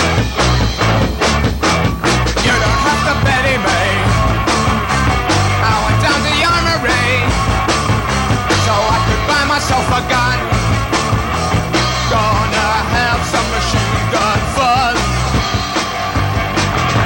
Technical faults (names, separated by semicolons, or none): video or display buzz